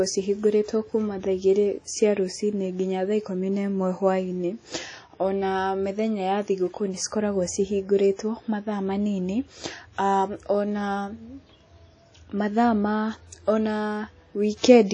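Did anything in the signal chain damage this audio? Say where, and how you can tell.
Yes. Across the whole speech clip there is a ringing, washy quality, with a hiss that swells and fades along with the talker, and nothing at all above about 10.1 kHz. That points to the codec stage, likely WMA compression from an early, simple encoder at a low bitrate around 32 kbps. Its long transform blocks smear quantisation noise over tens of milliseconds around each sound, and the hard top-end cut-off is where weak high-frequency lines were discarded.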